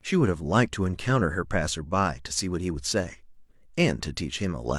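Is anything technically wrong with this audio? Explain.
No, nothing technically wrong stood out on listening to this speech clip.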